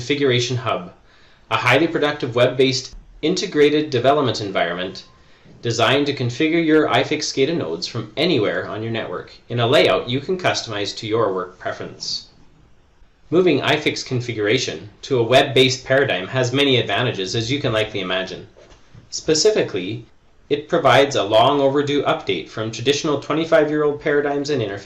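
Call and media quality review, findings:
Nothing to flag here; listened all the way along and there's no fault to report on this clip.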